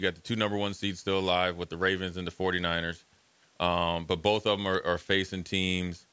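No technical faults can be heard in this speech clip.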